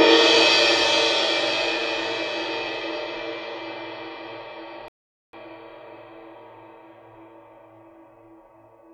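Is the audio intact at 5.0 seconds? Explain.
No, 5.0 seconds falls inside a playback stall. At 4.88 s the sound cuts off mid-flow and stays silent until about 5.33 s, a gap of roughly 450 ms, before the audio comes back. That is a hole in the output rather than a quiet moment in the material. The likely cause is the player running dry of data, or its playback thread getting blocked, so nothing reached the output until it caught up.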